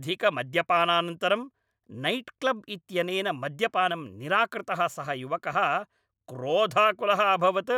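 No technical faults can be heard anywhere in the recording; the signal stays steady and intact throughout.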